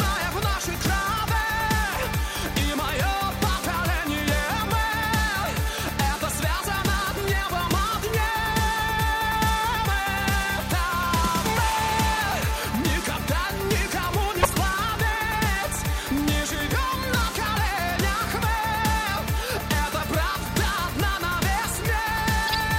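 Two short bursts of garbled noise at 14.40–14.55 s and 22.47–22.65 s: each is a corrupt frame decoded, with flipped bits misplacing energy across a brief run of frames.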